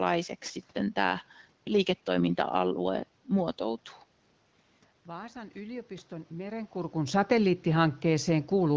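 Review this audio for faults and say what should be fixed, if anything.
Between 5.08 and 7.03 s the automatic gain rises by about 4 dB after the input falls by about 14 dB. Voice and room noise swell together over two seconds, which separates it from the talker simply moving back. Limiting the AGC's maximum boost would prevent it.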